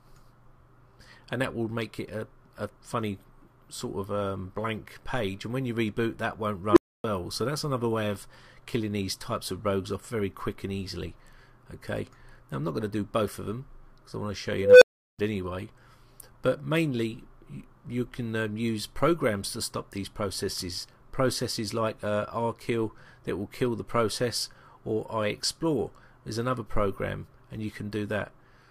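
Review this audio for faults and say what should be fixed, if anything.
An unstable filter fault occurs at 6.71–7.04 s, where a low tone near 300 Hz swells over 55 ms, and at 14.59–15.19 s, where a tone near 500 Hz swells over 230 ms. Each time the recursive filter's output runs away, clips, then overflows into silence for 279 ms and 372 ms respectively. That abrupt dropout distinguishes it from acoustic feedback, which keeps howling rather than cutting out. Check the coefficients for pole stability before applying them.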